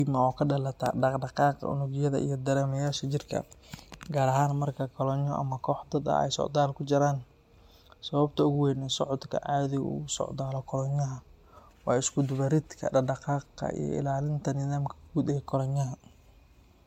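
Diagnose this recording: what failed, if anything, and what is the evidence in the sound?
Codec stage: the speech sounds swirly, hollow and smeared throughout, with blurred attacks, likely generation loss, where repeated MP3 passes around 100 kbit/s compound quantisation noise.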